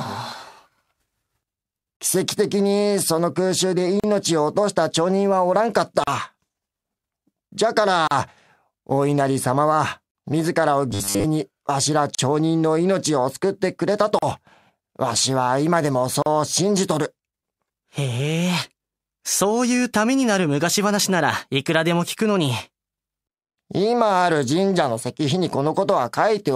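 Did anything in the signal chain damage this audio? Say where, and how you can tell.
Yes. Gaps at a join of encoded pieces, at the codec stage: silences of 31 to 38 ms at 1.97, 4.00, 6.04, 8.07, 10.11, 12.15, 14.19 and 16.22 s. They recur every 2.0 s, so start-up delay and end padding stayed in.

Robotic sound from 10.91 to 11.24 s, in the driver or buffer. A rigid 100 Hz buzz covers the speech, likely from a 10 ms buffer repeated for most of that stretch.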